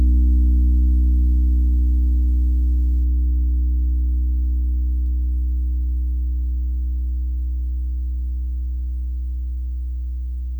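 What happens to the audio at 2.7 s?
Video or display buzz runs from the start to 3.04 s, so it is still present at 2.7 s. A screen or video cable is leaking its 75 Hz field-rate signal into the audio, giving a low buzz topped with hash, sitting roughly 35 dB under the sound.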